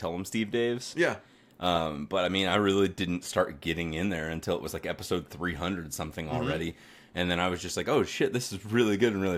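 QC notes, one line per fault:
0.23–8.73 s, clock slip clicks: around ten faint single-sample ticks at a steady spacing of roughly 0.7 s, likely from unsynchronised clocks; the even rhythm distinguishes them from random dropouts.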